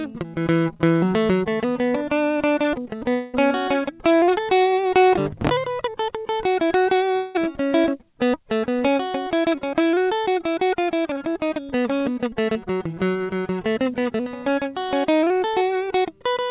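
Long network dropouts break up this music clip at 3.10 to 3.35 s and at 7.15 to 7.36 s, each lasting roughly a fifth to a quarter of a second. In both gaps the last sound is drawn out into a fading buzz or hiss with no true silence, and then the music resumes slightly further along with the missing stretch skipped. A likely cause is a run of lost packets on the call, which uses a G.711 A-law path with nothing above 4 kHz.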